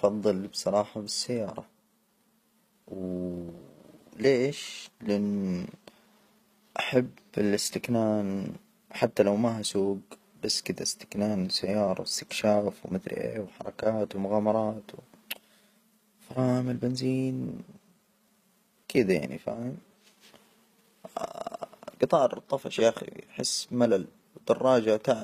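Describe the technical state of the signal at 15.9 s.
At 15.9 s the speech has gritty, metallic upper frequencies, with s sounds turning lispy. That is plainly audible HE-AAC compression running through the whole clip. Its likely cause is a low-bitrate encode near 24 kbps, where the treble is rebuilt by copying lower bands upward. The copied harmonics don't align with the real ones.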